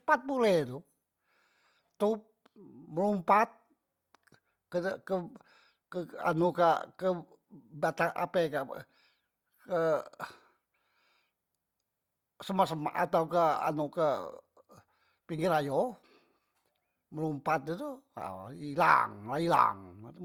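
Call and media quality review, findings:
Low-bitrate audio saved at a high bitrate, throughout. Nothing above 20.2 kHz. Artefacts point to an earlier low-bitrate Opus encode, likely re-saved as high-bitrate MP3.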